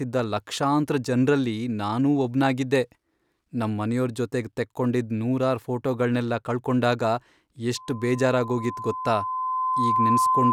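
At 7.75 s a loudspeaker feedback squeal begins and continues to the end of the clip at 10.53 s. The microphone is picking up the speaker it drives, and at 1 kHz the loop gain exceeds unity, so that tone feeds on itself and swells over about two seconds until it sits somewhat louder than the speech. On a spectrogram it shows as a single bright horizontal line at 1 kHz thickening from left to right. The waveform envelope grows steadily over the speech.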